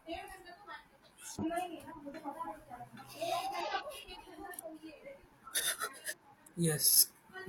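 Three short bursts of damaged data in the compressed stream break into the speech, at about 1.39 to 1.44 s, 3.61 to 3.66 s and 6.08 to 6.14 s, each lasting roughly 50 to 60 ms. At each spot the decoder runs into corrupted bytes, can't make sense of the frames, loses sync and hunts for the next valid frame header. What you hear is a quick glitch that briefly replaces the speech before it carries on.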